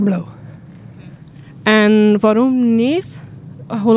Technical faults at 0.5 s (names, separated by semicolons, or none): none